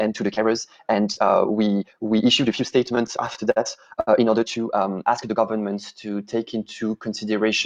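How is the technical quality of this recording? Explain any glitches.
The recording has three timing faults in its first 5.4 seconds.

From 0.0 to 5.4 s, the audio runs fast, at about 1.65 times normal pace. This is a time-stretched section. Software likely squeezed it by dropping short pieces while keeping pitch, so it sounds rushed.

From 2.86 to 3.58 s, there are repeated stalls (stutter). Late packets kept emptying the jitter buffer. The receiver held the last sound through several waits, the longest about 49 ms. The sound drags and stutters.

At 4.00 to 4.09 s, there is a short stall from a late packet. The receiver stretched the last sound for about 70 ms until the packet arrived. One sound hangs too long.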